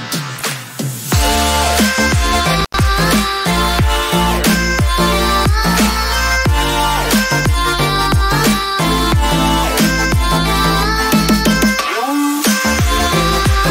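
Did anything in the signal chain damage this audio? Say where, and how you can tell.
Yes. An intermittent contact in the analogue wiring, between 2.60 and 2.78 s, opens the circuit for about 93 ms. The sound cuts out with crackle at both edges, and faint hiss remains. The waveform collapses to near-flat between the spikes, and the spectrogram shows broadband vertical streaks around a gap.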